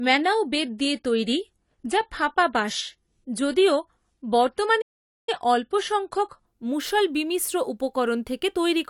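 From 0.0 to 6.46 s, the adaptive stream starts at a low bitrate. The treble is missing or synthetic, and artefacts suggest roughly 32 kbit/s AAC. Quality jumps cleanly before "মুষল বিমিশ্র উপকরণ".

At 4.81 s, a playback stall silences the speech for about 460 ms. Sound resumes at 5.29 s. The player likely ran short of buffered data.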